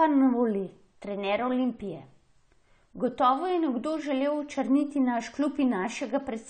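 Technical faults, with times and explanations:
Throughout, AAC compression: the speech sounds dull and smeared, with nothing above 9 kHz and a warbly, fizzy edge on sibilants. That's likely AAC-LC at a low rate, around 32 kbps, where the encoder cuts the top end and starves bands of bits.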